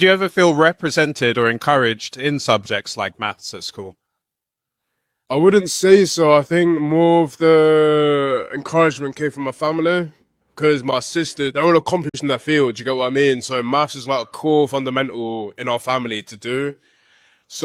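At 12.09 to 12.20 s there is a digital broadcast dropout. The receiver stopped getting valid data and muted, fading down over about 8 ms. Roughly 43 ms of programme is missing, which fits a single lost frame, before sound returns later in the programme.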